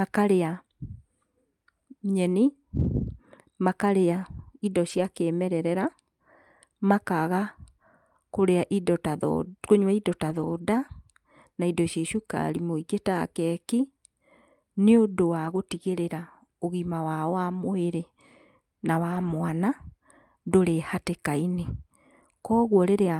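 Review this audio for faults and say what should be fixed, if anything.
Lost packets rebuilt from error correction at 2.75–2.85, 4.89–4.99, 10.29–10.59, 15.45–15.59 and 19.11–19.29 s: low-bitrate backup copies fill each loss without a gap, so the speech turns rougher and noisier, visible as smeared, grainier spectrogram patches. Reducing network packet loss would prevent it.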